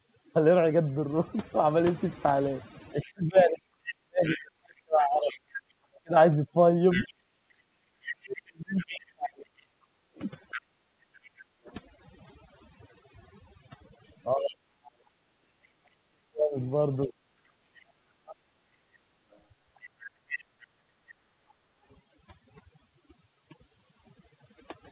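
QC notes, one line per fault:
Throughout: overdone noise removal. The background sits close to silence with small twinkling specks. The reducer pushed individual frequency bands down whenever they came near its noise estimate, and it took the quieter parts of the speech away with the noise. The result is spectral holes rather than a broadband level drop.
2.92–9.50 s and 14.33–18.37 s: speech suppressed in double talk. The speech dips, falling by something like 40 dB at its worst, over roughly 4 s and 3 s in total. Both sides are talking here, which makes an echo canceller that could not tell near speech from echo the likely cause.
3.08–14.91 s and 19.35–21.94 s: other side's voice leaking through. A second voice comes through at around 15 dB below the main speech. This is likely residual loudspeaker echo that the canceller did not fully subtract. It is a separate voice added on top.
9.78–11.72 s, 14.91 s and 19.81–21.84 s: background gated by the echo canceller. 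The room sound dips by about 14 dB, about 10 dB at the short 14.91 s dip, and then recovers. The canceller clamped the microphone while the loudspeaker played. Unlike double-talk suppression, this hits the background, and it comes back once the canceller releases.
The call path runs through G.711 A-law, with nothing above 4 kHz, and this sets the narrowband tone under all of the above.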